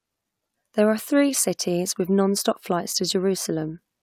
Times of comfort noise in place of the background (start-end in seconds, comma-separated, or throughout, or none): none